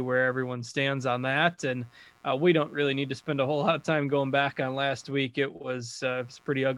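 From start to finish the speech carries computer activity noise: a faint buzzing chirp, pulsing at around 100 times per second, sitting roughly 35 dB below the speech. It rises and falls on its own schedule, independent of the talking, because it comes from the computer rather than the microphone. Shifting load on the processor, graphics hardware or mouse moves the shared ground reference, and the audio circuit picks up those fluctuations as interference.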